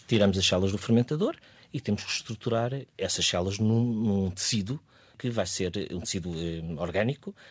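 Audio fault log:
0.13–0.53 s, microphone overload: The loudest peaks in this stretch have their tops sheared flat. The signal is driven about 4 dB past full scale, and around one percent of samples sit at the limit. The flattened waveform adds harsh, crackly harmonics to the strongest syllables. They sound gritty rather than simply loud. The likely cause is a microphone input level set too high, so the converter runs out of headroom. The band stops at 8 kHz, consistent with a wideband call codec, so the added grit stays below that frequency.
1.02 s, microphone volume stepped down: The whole signal drops by about 4 dB in a single step. Speech and background noise fall together, and the change is abrupt rather than gradual. It comes half a second after the distorted peaks, which suggests a reaction to them. The likely cause is the call software detecting the overload and lowering the device's input gain in one adjustment. 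That is why the level settles lower.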